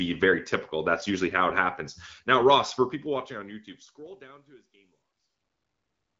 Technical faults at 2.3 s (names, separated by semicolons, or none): none